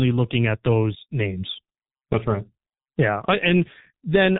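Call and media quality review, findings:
Speech muffled and hoarse throughout, consonants smeared, nothing above 3.9 kHz. Probable component: G.723.1 codec, heavy damage, consistent with its 6.3 kbit/s mode. Cause: 30 ms frames and a slow-updating voice model blur fast transitions. Band-limited encoding removes high-frequency content.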